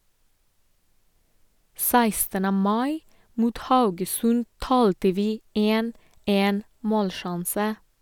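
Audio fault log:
Nothing to log here, since no technical faults turn up anywhere in this bit of speech.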